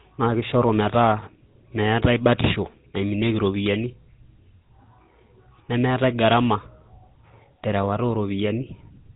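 From start to finish the speech carries GSM full-rate codec damage, plainly audible as a buzzy, gravelly roughness, consistent with 13 kbps full-rate coding. The codec rebuilds each voice from a vocal-tract filter fed by sparse, regularly spaced pulses, so fine detail in the excitation is lost and the voicing turns rasping. Nothing survives above 3.8 kHz, giving a dull, boxed-in tone. A spectrogram shows a hard ceiling at 3.8 kHz with coarse, smeared harmonics beneath it.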